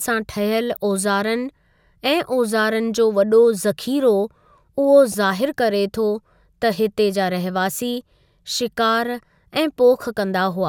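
At 5.10 s the speech is hit by a corrupt frame decoded. The damage lasts about 40 ms, to 5.14 s. Bits inside the compressed data were flipped, and the decoder played the frames anyway. It misread the codes and gains, so energy landed at the wrong frequencies. That fits a couple of damaged frames. The result is a short chirp or burst of noise over the speech. It peaks at about -15 dBFS.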